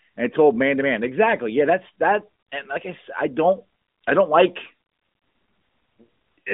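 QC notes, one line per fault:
No faults are heard in this speech clip. The AMR narrowband mobile codec is audible as a telephone band of roughly 200 Hz to 3.7 kHz with nothing above about 3.8 kHz and only light coding texture, which fits its 12.2 kbps mode.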